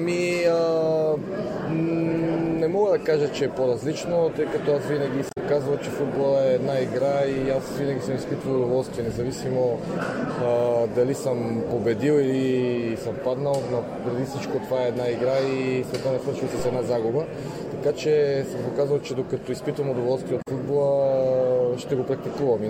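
Damaged data in a compressed stream appears first from 5.27 to 5.38 s. For about 0.11 s the decoder is handed bytes that no longer form valid frames, so it misreads them, loses frame sync and hunts for the next good header. The result is a brief chirp or squawk rather than the sound itself.

A DC step follows at 16.59 s. The waveform's zero line suddenly shifts and the sound rides on that offset. The step is heard as a single low thump or click while the audio carries on unchanged. The offset then drains away through a high-pass response around 2 Hz, fading out within a few tenths of a second.

Damaged data in a compressed stream returns from 20.41 to 20.48 s. This shorter patch, about 70 ms, makes the same kind of blip as the decoder again drops sync and has to find its way back to a clean frame.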